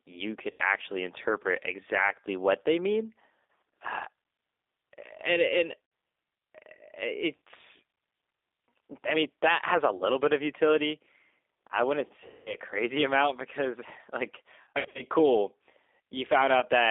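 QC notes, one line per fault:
throughout: G.729 codec. The sound is confined to roughly 300 Hz to 3.7 kHz, with a plainly rough, slightly synthetic texture. That fits an 8 kbit/s G.729A coder rebuilding each frame from a vocal-tract filter, a pitch predictor and a few excitation pulses.
0.51–0.61, 3.50, 5.84–5.92, 7.39, 9.97–10.04, 12.26–12.58, 14.63–15.03, 16.60–16.65: VoIP packet loss concealed by the speech codec. Each gap of roughly 20 to 80 ms, or 200 ms at 12.26, is filled by a buzzy tone or coloured noise that fades as the decoder repeats its last pitch and filter. At 14.63–15.03, about 220 ms of losses are scattered in runs of up to 60 ms, so the concealment recurs.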